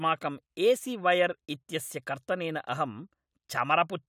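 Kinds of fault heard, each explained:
No kinds of fault are heard in this speech.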